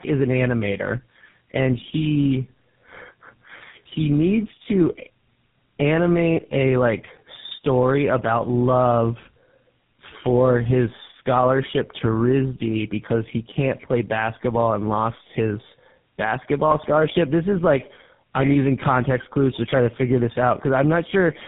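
Tandem speech coding runs throughout the speech: it sounds as if the call was decoded and re-encoded at each network border, perhaps three narrowband coders in series, ending with something like GSM full rate. Each stage degrades the last, leaving rough, muffled, warbly speech with nothing above 3.7 kHz.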